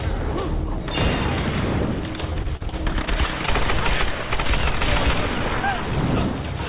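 Repeated packet loss (robotic sound) runs from 2.30 to 3.09 s. Nine separate holes, the longest 32 ms, are each patched by extending the preceding sound, so roughly a quarter of that stretch is synthetic. The result is choppy and fragmented, with pieces missing.

Short concealed packet loss follows at 3.46 to 3.49 s. About 20 ms failed to arrive in time, and the receiver bridged it by carrying the last sound forward before blending back, leaving a brief smear or wobble. It comes through the narrow call band, which stops at 4 kHz and fits G.711.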